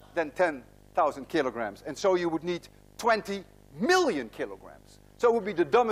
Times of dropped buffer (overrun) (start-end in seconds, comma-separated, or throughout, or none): none